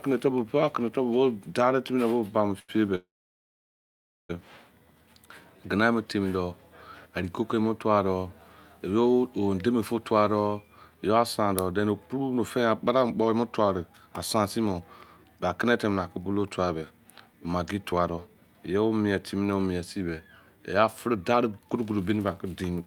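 Speech recorded over a call link, with three kinds of packet-timing fault. Right after "bo buba me", a short stall from a late packet runs from 2.59 to 2.78 s. The receiver filled about 91 ms by stretching the last sound while it waited. On a spectrogram this shows as a brief smear of flat, unchanging harmonics. In the waveform it is a held stretch with a slight buzz or dip, and the speech then resumes where it stopped, with nothing lost. A call audio freeze follows from 2.95 to 4.31 s, likely from packets held up in transit so that the jitter buffer ran dry. The last sound is continued briefly as a fading buzz, and then about 1.23 s goes flat and silent. The waveform is a near-empty band, and the spectrogram is a dark gap before the speech continues intact. The clip also shows jitter buffer speed-up three times, where the receiver trimmed small pitch-period slices to drain excess buffered audio: 10.94 to 15.25 s just after "fu tua doh", at 108% and roughly 0.4 s removed; 16.75 to 18.57 s, ending just before "yo mie", at 113% and roughly 0.2 s; and 21.07 s to the end, at 111% and about 0.2 s. 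Pitch holds steady, but syllables arrive hurried. On a spectrogram the harmonic lines keep their spacing while the syllable patterns are compressed in time.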